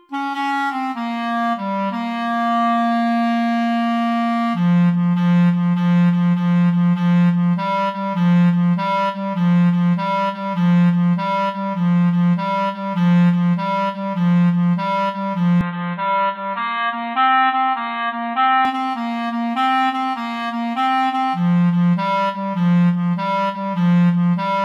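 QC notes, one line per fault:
15.61 to 18.65 s, input switched to a poorer device: the sound turns dull and boxy, with nothing above 4.2 kHz, a faint new hiss, and slightly lower level. A likely mid-recording input change, with no gap at the switch.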